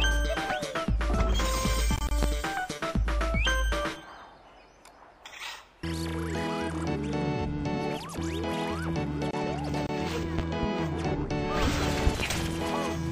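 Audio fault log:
2.23–2.26 s, 10.39–10.67 s and 12.07–12.23 s, loud pop. The first event is a single sharp pop, about 20 dB above the sound. The second and third are each two pops in quick succession, about 15 dB above the sound. The sound carries on underneath each one. A sudden electrical step or pulse, likely from a plug, switch, static or driver glitch, was added to the signal. The circuits after it shaped the pulse.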